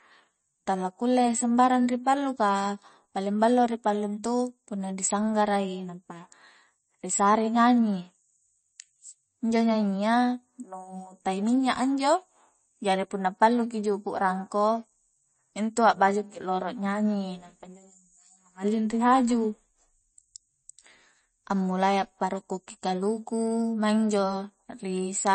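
From start to finish the speech carries plainly audible coding damage, most likely from MP3 compression. Nothing survives above 8.3 kHz, so the top of the spectrum is cut flat and sibilants lose their edge. Weak frequency components drop in and out between frames, giving a watery, swirling texture with metallic chirps on s sounds and softened consonant attacks. The depth of damage fits a low bitrate of around 32 kbps, where the encoder runs short of bits.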